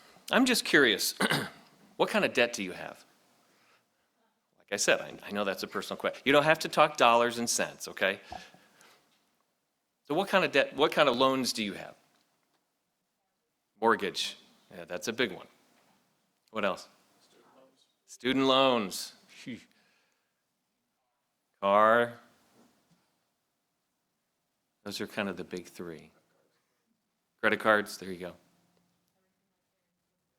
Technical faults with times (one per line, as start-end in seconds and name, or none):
1.02 dropped samples
11.14 dropped samples
14.25 dropped samples
25.33 dropped samples